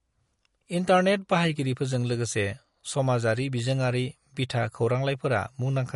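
From start to end, the speech carries plainly audible MP3 compression damage, likely from a low bitrate near 48 kbps. Nothing is heard above 11.2 kHz. Weak frequency lines drop in and out between frames. The sound turns watery and swirly, and s sounds chirp metallically.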